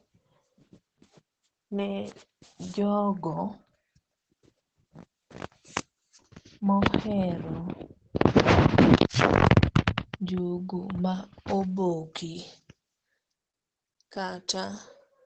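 Throughout the speech, the sound is muffled and hoarse, with nothing above about 8.7 kHz; a spectrogram shows a flat ceiling there. This points to likely Opus compression in its speech mode, heavily damaged at a very low bitrate, around 12 kbps.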